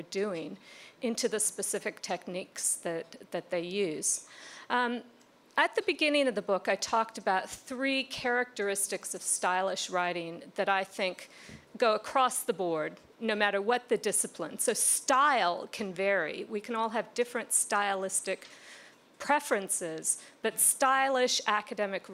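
At 12.36 s the audio has a repeated buffer: a 1.45 ms piece, which fits a 64-sample buffer, plays three extra times when new data misses its deadline. Because the piece is so short, the repeats sound as a single click or brief buzz rather than a stutter, and essentially no audio is lost. On a waveform, identical tiny segments sit side by side with hard joins. A spectrogram shows a thin vertical streak with harmonics spaced near 690 Hz.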